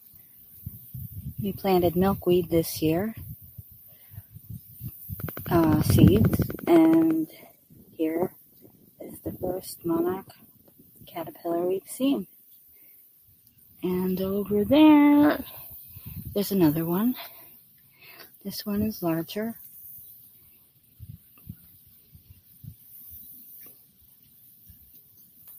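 Throughout the clip, a noise suppressor applied to music or sounds treats sustained material and ambience as noise, pulling it down by varying amounts, with swings of around 15 dB. Attacks survive while held portions and tails sink, so the level pumps and thins rather than dropping out cleanly as a gate would.

The sound is cut by the noise suppressor at 0.0 to 0.55 s (about 6 dB), 3.36 to 4.75 s, 7.52 to 9.0 s, 10.32 to 11.07 s, 12.29 to 13.82 s, 17.49 to 18.41 s, 20.15 to 22.86 s and 23.73 s to the end, the deepest of these by about 8 to 9 dB. Decays are clipped short there while onsets stay intact, unlike a full dropout.

From 5.2 to 7.1 s a train of clicks ticks at a steady 11.5 per second, roughly twenty near-identical pulses standing well above the sound. They are likely interference from nearby equipment. Their even spacing and uniform shape separate them from random crackle or dust.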